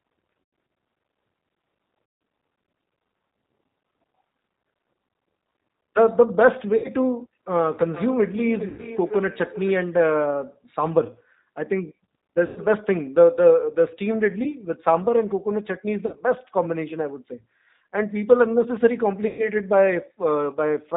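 The speech is carried over the 8 kbit/s G.729 codec, which rebuilds it from a vocal-tract filter, pitch predictor and sparse pulses and discards everything above 4 kHz. The result is a plainly audible narrow, rough, slightly synthetic sound. VoIP packet loss concealed by the speech codec occurs at 0.43–0.53, 2.05–2.21, 6.76–6.90, 8.68–8.85, 12.46–12.59, 14.44–14.48, 16.06–16.16 and 19.27–19.49 s. At each point the decoder extrapolates its last pitch and filter, so the speech smears into a fading buzzy tone or coloured noise and stays weakened briefly after packets return.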